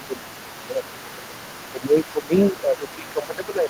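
Speech runs the whole length, and a second, fainter voice sits under it throughout: the other side's voice leaking through, roughly 20 dB below the talker. On a spectrogram this shows as a weak, separate set of harmonics under the main ones. It is likely left over from the far end being played on the talker's loudspeaker and not fully cancelled at the microphone. The talker's own speech is also repeatedly pushed down, which is speech suppressed in double talk. The dips run from 0 to 0.29 s (around 20 dB at the deepest), 0.66 to 1.43 s, 1.72 to 2.33 s, and 2.52 s to the end (each around 15 dB). The likely cause is an echo canceller that turned down both voices while the two sides talked at once.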